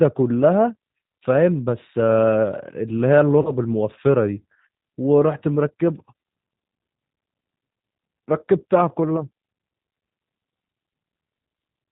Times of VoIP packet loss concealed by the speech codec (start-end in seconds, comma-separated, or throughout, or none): 3.42-3.54